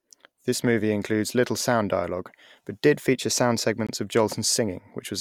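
At 3.87 s, just after "but did feature sound", the output buffer was probably not filled in time, leaving a block of digital silence about 20 ms long. The speech drops straight to silence and back with no fade, heard as a brief hole.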